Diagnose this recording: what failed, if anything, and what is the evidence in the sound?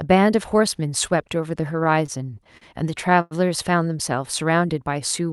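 Repeated stalls (stutter) in the network and jitter buffer: from 1.84 to 3.33 s, late packets emptied the buffer ten times, and the receiver stretched the previous sound over each gap, the longest 100 ms. Nothing is lost, but the speech drags and stutters.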